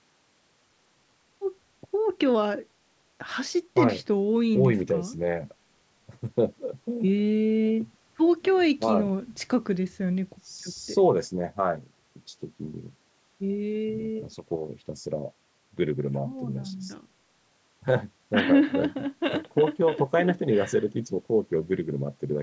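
Nothing stood out on listening to this speech, which carries the usual character of call microphone processing with its low bass trimmed away and nothing above 8 kHz.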